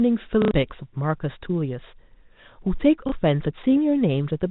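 Packet loss with the last packet repeated hits at 0.42 to 0.51 s and again at 3.09 to 3.12 s. The receiver lost packets and filled each gap by replaying the last one it had, which fits 30 ms packets: three replays in the first gap, one in the second. The copies seldom line up with the pitch, and the longer gap buzzes at about 33 Hz as a brief robotic stutter, heard through the telephone band's 4 kHz ceiling.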